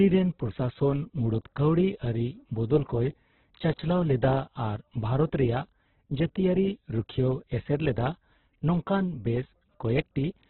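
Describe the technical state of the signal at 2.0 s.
At 2.0 s the speech sounds heavily degraded: muffled and boxed-in, with nothing above 4.2 kHz, and a rough, grainy texture where tonal parts of the voice should be clean. This persists through the whole clip rather than appearing at that moment. The likely cause is Opus compression at a very low rate, which fits about 8 kbps in its music mode. Starved bands get filled with folded or noise-like content, so detail turns granular instead of swirling, and the bandwidth collapses to narrowband.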